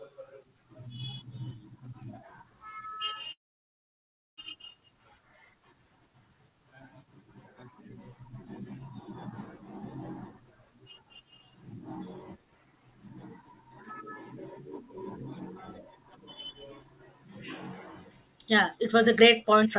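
From 3.32 to 4.39 s a call audio freeze fills about 1.05 s, mostly silence, likely from stalled packets draining the jitter buffer. Speech resumes where it stopped, so unlike a dropout nothing is lost. From 18.75 to 19.76 s a jitter buffer speed-up plays the speech about 120% fast and trims roughly a fifth of a second, with the pitch unchanged rather than raised as resampling would.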